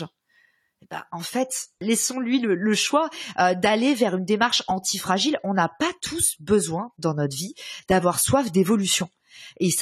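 Adaptive stream at a lower bitrate from 1.06 s onward: the speech suddenly loses everything above 14 kHz and grows artefact-laden, with no gap, which fits a switch to about 32 kbit/s.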